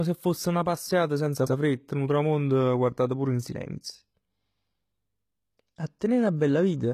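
From start to finish the speech shows low-bitrate audio saved at a high bitrate: nothing sounds above 15 kHz, and earlier compression artefacts persist. The likely cause is a low-rate HE-AAC encode, near 20 kbit/s, re-encoded as high-rate MP3, which cannot restore the discarded detail.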